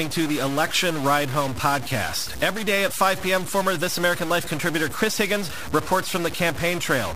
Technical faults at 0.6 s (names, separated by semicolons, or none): stuck bit